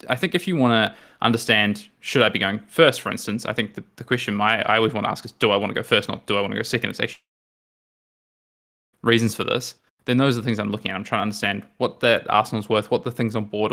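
A tick at 0.87 s, after "think if you want", and another at 4.92 s, before "want to ask is": each is a block of digital silence, 2.18 ms and 0.73 ms of zeros that cut in and out abruptly.

From 7.13 s a brief fading buzz gives way to about 1.7 s of silence, with sound resuming at 8.95 s on "reasons for this". This is likely a long network dropout, losing about 1.8 s of audio.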